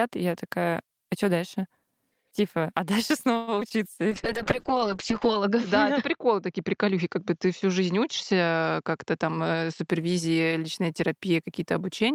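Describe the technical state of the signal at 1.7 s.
At 1.7 s the speech signal is intact, with no audible technical fault at that moment.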